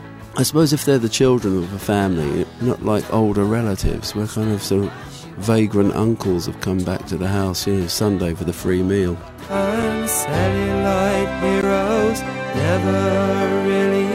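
At 9.82 s there is a block of digital silence about 5 ms long. At 11.61 s there is a second one, about 15 ms long. In both places the signal drops straight to silence and then returns, with no fade in or out. That points to output buffers that were not filled in time. The shorter gap is heard as a tick or dip. The longer one, just under 15 ms, is also heard as a tick or dip and not as a hole.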